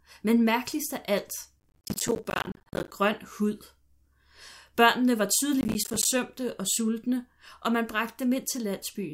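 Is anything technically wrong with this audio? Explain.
Yes. Processor overload crackle appears from 1.6 to 2.92 s and again from 5.61 to 6.05 s in this speech. The processor misses many buffer deadlines in a row, each gap of around 10 ms filled with silence. Dozens of these hard-edged dropouts run together into a gritty, tearing crackle over the speech that stops once the load eases.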